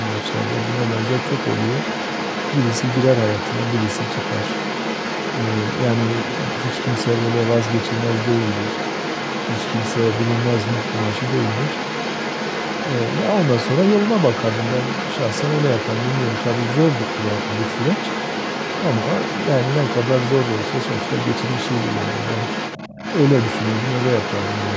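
Throughout the clip, a second voice sits only slightly below the main speech. This is the other side's voice leaking through, likely loudspeaker playback that the echo canceller failed to remove. Unlike a second person in the room, it is the far end of the call returned through the microphone.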